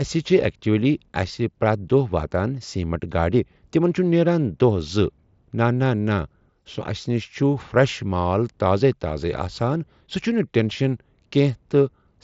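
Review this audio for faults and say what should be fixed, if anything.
No faults found, so nothing needs fixing.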